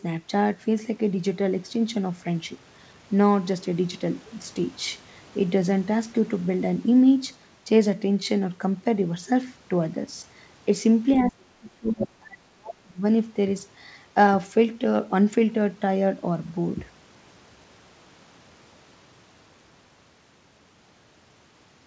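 From 11.26 to 13.03 s the speech dips and drops out in pieces, falling by something like 35 dB at its deepest, for roughly a second and a half in total. This is likely speech suppressed in double talk, with the echo canceller muting the talker along with the echo.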